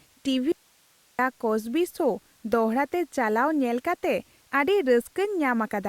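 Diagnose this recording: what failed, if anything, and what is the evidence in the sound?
An audio dropout to a faint residue runs from 0.52 s to 1.19 s: the speech cuts off abruptly for about 670 ms and only hiss remains, roughly 35 dB below the speech level, before the speech returns just as suddenly. On a waveform the envelope collapses to a thin noise band with sheer edges. A spectrogram shows clean vertical cuts and a flat, faint broadband floor between them. The likely cause is a momentary break in the analogue wiring or connection ahead of a still-live input stage.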